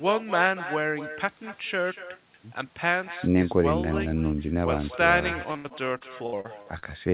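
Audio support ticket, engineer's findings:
Echo with no canceller, throughout. Every phrase shadowed by a quieter, thinner copy about 13 dB down, trailing by roughly a fifth of a second. Far-end loudspeaker pickup returned over the network round trip, no echo cancellation at the far end.

Repeated packet loss (robotic sound), 5.52–6.84 s. Choppy, with pieces missing. Eight gaps, longest 78 ms, about a quarter of the span concealed. Jitter buffer patching each loss by extending the last sound before the next loss arrives. The band stops at 4 kHz, consistent with a narrowband G.711 call path.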